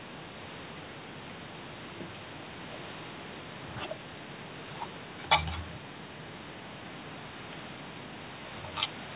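No faults found; the speech has the narrow band of a telephone call, with nothing above 4 kHz, as expected from a G.711-type codec on the call path, and the missing lowest bass is the normal high-pass of call microphone processing.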